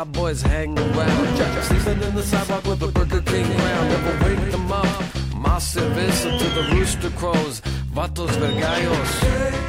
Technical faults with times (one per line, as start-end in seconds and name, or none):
0.77-5.33 doubled audio track